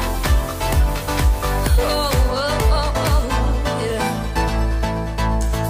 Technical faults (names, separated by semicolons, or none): none